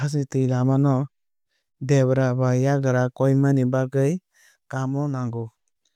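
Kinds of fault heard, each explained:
Nothing stood out on listening to the speech in this recording.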